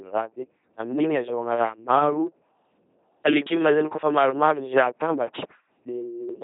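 Throughout, the speech is rendered by an LPC-10 vocoder: buzz or noise drives a low-order filter, giving a heavily damaged robotic buzz, nothing above 3.8 kHz, consistent with 2.4 kbit/s.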